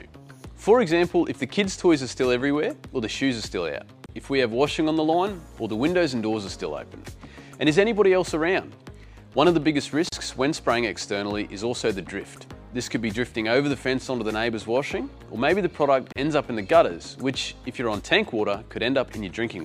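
Separately encoded pieces were joined without trimming each one's start-up delay and final-frame padding, leaving a gap at a join of encoded pieces every 6 s: 4.06–4.09 s (about 30 ms), 10.09–10.12 s and 16.12–16.16 s (about 34 ms each). The sound drops out abruptly, with smeared edges, then resumes where it stopped.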